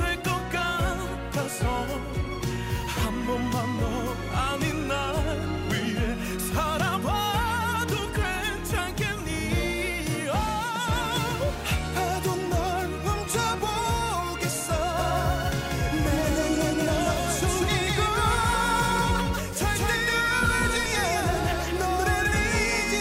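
From 14.99 s to the end, the sound is doubled. A second copy runs about a fifth of a second behind the first, at roughly the same level. It is full-band, with no decay and no room colour, so it reads as a hard echo, not reverb. It switches on abruptly at 14.99 s. This doubled audio track likely comes from the audio being captured twice, once through a slower path, with both copies mixed together.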